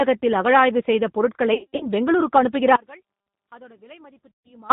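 Throughout, the G.729 codec at 8 kbit/s leaves the speech rough and synthetic, and a spectrogram shows nothing above 4 kHz. After "அகழாய்வு செய்த பொருட்களை", from 1.54 to 1.87 s, VoIP packet loss concealed by the speech codec fills about 210 ms of gaps, the longest 90 ms. The speech turns buzzy and fading, with smeared, flat harmonics on a spectrogram. From 2.76 to 4.70 s the level drops by about 28 dB into a faint residue, likely one channel inverted cancelling in a mono sum, and the waveform shrinks abruptly. Inside that stretch, at 4.35 to 4.49 s, another 140 ms of concealed loss adds a decaying buzz.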